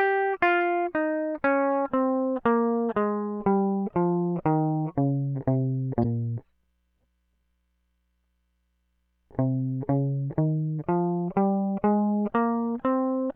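At 6.00 to 6.05 s the music breaks into a brief glitch from damaged data in a compressed stream: corrupted bytes make the decoder misread frames and hunt for the next valid header. A spectrogram shows a short broadband smear; the waveform, a jagged discontinuity.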